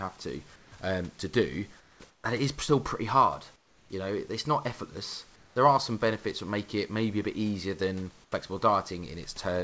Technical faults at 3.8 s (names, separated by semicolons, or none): comfort noise in place of the background